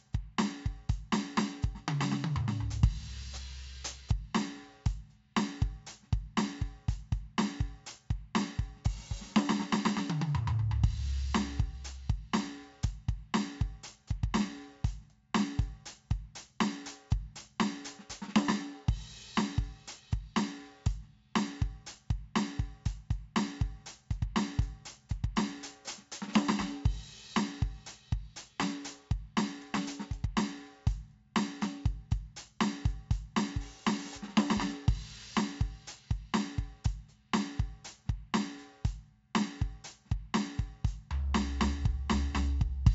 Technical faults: 4-bit ADPCM compression

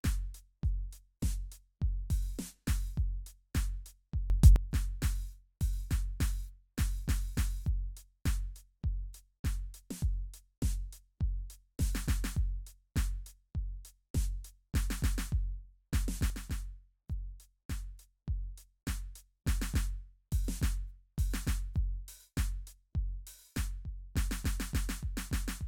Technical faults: sudden gain jump

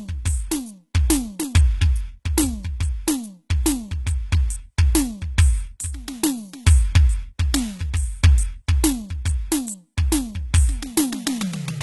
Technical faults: HE-AAC compression

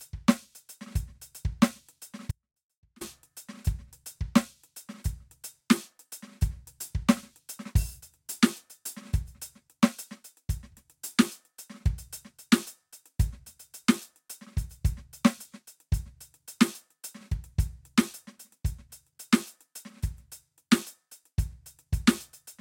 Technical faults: audio dropout to a faint residue

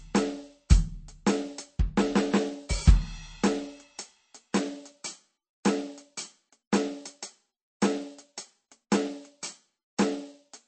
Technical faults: MP3 compression

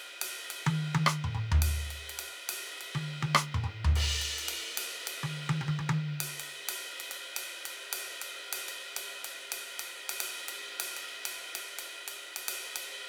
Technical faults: sample clock jitter

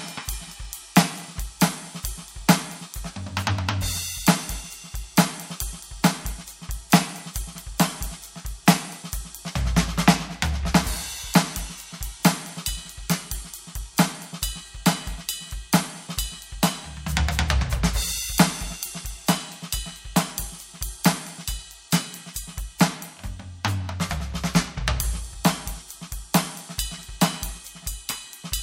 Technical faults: none

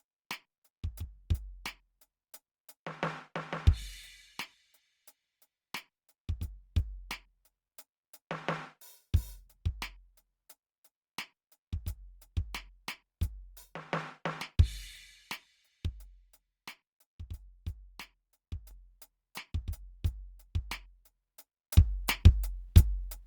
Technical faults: sudden gain jump

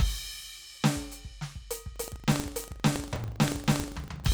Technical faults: buffer tearing

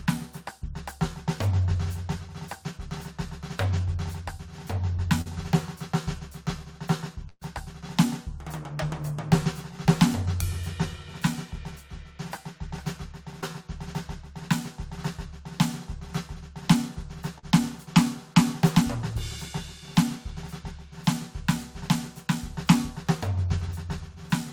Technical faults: short concealed packet loss; burst of packet loss

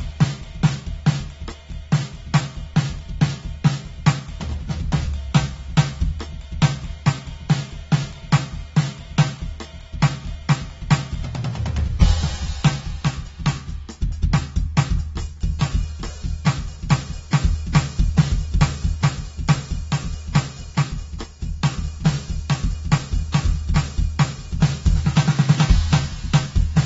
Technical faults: AAC compression

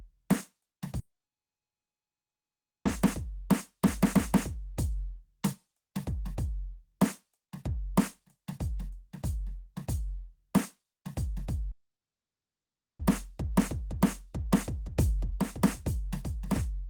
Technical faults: long network dropout; doubled audio track

